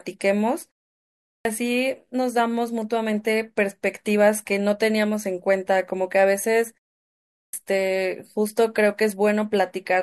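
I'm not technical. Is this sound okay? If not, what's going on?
No. There's a clipped start after a pause at 1.17 s and again at 7.26 s: after each half-second silence, the playback device seems to doze off and wakes too late, swallowing roughly a quarter second, so speech begins abruptly. Muted pauses would only silence the background, never cut speech.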